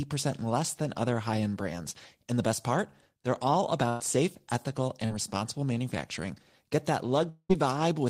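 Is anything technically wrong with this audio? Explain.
Yes, three network faults interrupt this speech.

At 3.89 to 4.02 s, just before "safe ethical", the last sound is held and fades for about 0.1 s. This is a burst of packet loss: around 100 ms never arrived, so the receiver stretched what it had.

At 5.06 to 5.11 s, between "safe ethical" and "responsible manufacturing", a brief smear appears. This is short concealed packet loss: about 40 ms went missing and was patched by extrapolation.

At 7.29 to 7.51 s, a fading continuation of about 0.2 s gives way to roughly 50 ms of silence before the sound resumes. The likely cause is a long network dropout, with about 200 ms lost outright.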